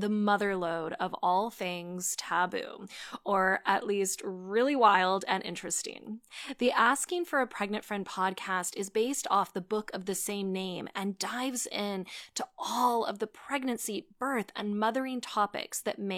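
A speech recording, and nothing technically wrong turns up anywhere in it.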